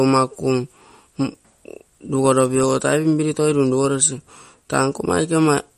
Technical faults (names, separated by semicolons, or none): MP3 compression